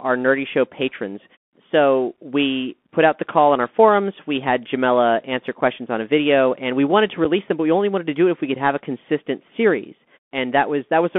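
From the start, the speech carries the sound of a Bluetooth CVSD headset codec. The band runs from about 200 Hz to 3.5 kHz, so the top end is gone. The damage is plainly audible. This codec tracks the waveform one bit at a time, stepping up or down with an adaptive step. That fits a 64 kbps CVSD link. Where the step cannot keep up, the sound turns scratchy. A grainy hiss sits under everything.

At 5.61 s there is unconcealed Bluetooth headset packet loss. About 7.5 ms of audio drops out with nothing to cover the gap. The edges are abrupt, so the hole is heard as a brief break. Its size points to a single lost packet between headset and phone. The same thing happens again at 7.25 s. It is another hard 7.5 ms gap that leaves a sharp little dropout.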